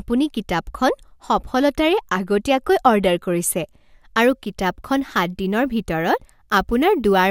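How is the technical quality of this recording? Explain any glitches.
The recording has one clear fault, crude rate conversion, from 4.21 s to the end of the speech. The sample rate was raised without filtering, simply repeating the nearest sample. The regular repeat pattern fits a 3:2 step from 32 kHz to 48 kHz. That pattern creates tones unrelated to the voice, sitting around 25 dB below it. It is heard as a gritty, inharmonic fizz that rides on the louder and brighter parts of the speech.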